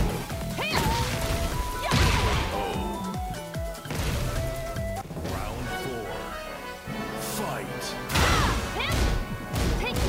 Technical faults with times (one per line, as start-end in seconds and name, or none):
0.00-10.09 low bit depth without dither